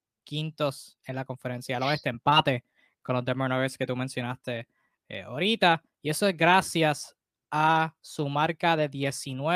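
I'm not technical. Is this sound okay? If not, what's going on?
Yes, nothing wrong can be heard in this recording.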